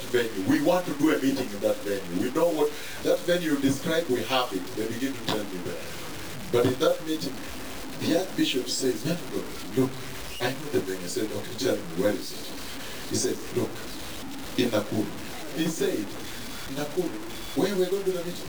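All the way through there's grainy, signal-following distortion that turns quiet passages gritty, likely low bit depth without dither, around 5-bit truncation, with grit barely 15 dB down.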